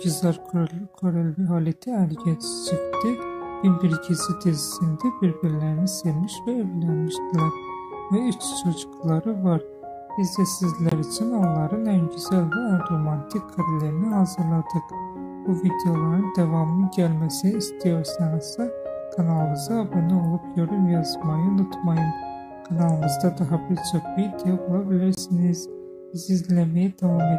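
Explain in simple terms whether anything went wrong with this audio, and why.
The sound cuts out briefly twice, at 10.89 s and 25.15 s. The gaps last about 36 ms and 32 ms. This is likely a Bluetooth dropout: one chunk of audio arrived too late and was skipped. Afterwards the sound picks up as though it had kept playing.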